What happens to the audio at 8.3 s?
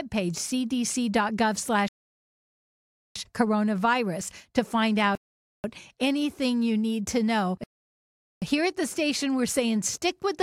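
A rebuffering stall, from 7.64 to 8.42 s, right after "you need to know": the player ran out of downloaded audio, went silent for 0.78 s, then resumed exactly where it stopped.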